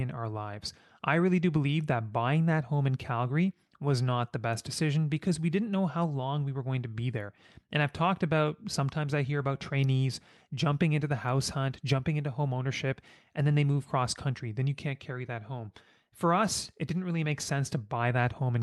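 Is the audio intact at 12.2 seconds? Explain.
Yes, the audio is intact at 12.2 seconds, with no dropout, glitch or other fault at that moment.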